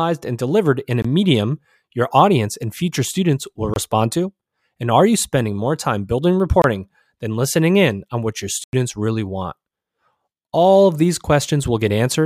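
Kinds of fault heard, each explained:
Block of digital silence: the speech cuts abruptly to silence and returns with no fade. Three gaps near 1.02, 3.74 and 6.62 s each last 23 ms and are heard as short holes, which fits a 1024-sample buffer not filled in time. A longer gap at 8.64 s lasts 93 ms and sounds like a brief hole. Waveform: flat lines. Spectrogram: blank vertical strips.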